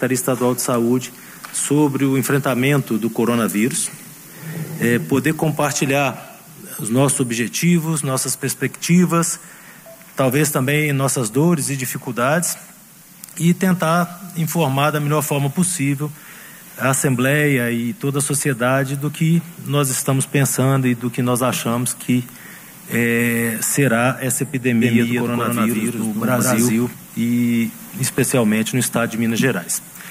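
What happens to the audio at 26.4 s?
A doubled audio track runs from 24.81 to 26.93 s: a second full-band copy about as loud as the original trails it by roughly 150 ms, with no decay or room colour. It likely comes from a slower capture path mixing the audio in twice.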